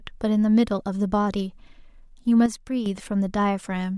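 At 2.46 s a sudden gain jump drops the speech and background noise together by about 7 dB until 2.86 s, likely from an unramped gain change.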